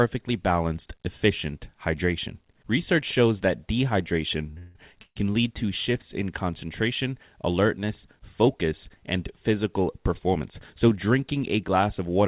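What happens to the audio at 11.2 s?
Nothing goes wrong at 11.2 s: the speech carries on intact, with only the narrow telephone-band sound of the call path, which tops out at 4 kHz.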